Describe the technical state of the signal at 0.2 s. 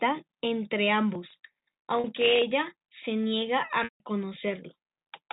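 At 0.2 s the audio is intact, with nothing beyond the narrow telephone band of G.711 coding audible there.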